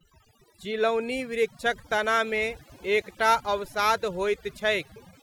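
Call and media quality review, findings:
Background pulled to near silence with twinkling specks between phrases. Present throughout the clip. Probable component: noise suppression stage, set too aggressive. Overdone noise removal: bands sitting near the noise estimate gated hard down or off, so quiet speech detail is cut with the noise, leaving isolated tonal residue that sparkles.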